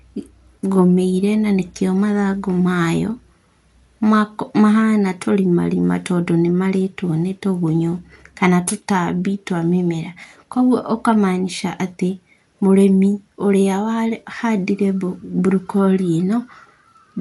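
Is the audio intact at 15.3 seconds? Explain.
No. The speech at 15.3 s is dull, with nothing above 11.4 kHz. The damage runs throughout. The likely cause is low-bitrate Dolby Digital compression, around 64 kbps.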